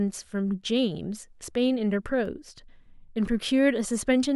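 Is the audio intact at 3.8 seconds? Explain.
No. 3.8 s falls within periodic USB or driver dropouts from 2.26 to 4.26 s: once per second, a background task stalls the driver, dropping well under a millisecond to silence, heard as regular ticks.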